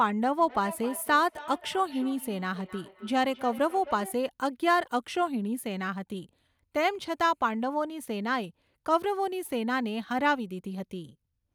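From 0.38 s to 4.23 s the speech carries a feedback echo between two devices. A second device in the same room is playing back this microphone's signal, and the microphone captures it again. The local echo canceller only removes its own device's playback, so this returned copy gets through. Each word recurs roughly every 300 ms as a thinner, ringing repeat, peaking about 16 dB below the direct speech.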